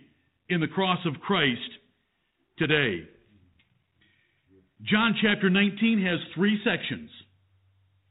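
No technical faults are audible.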